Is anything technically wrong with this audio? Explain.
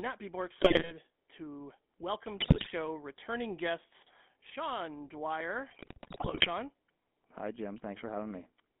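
Yes, two things. The whole clip runs through a GSM full-rate codec, with the line band squeezed to roughly 200 Hz to 3.5 kHz. The codec rebuilds the voice from a vocal-tract model driven by a coarse pulse train, so the speech comes out buzzy and gravelly, and the damage is plainly audible throughout.

On top of that there are GSM bit errors in three bursts. The first runs from 0.55 to 0.92 s, right after "be more" and before "to welcome". The second runs from 2.39 to 2.67 s, between "to welcome" and "returning guests". The third runs from 5.68 to 6.48 s. Corrupted filter, pitch and gain values bend the spectrum and spike the level frame by frame, so these stretches turn into squawks, pops and gargling.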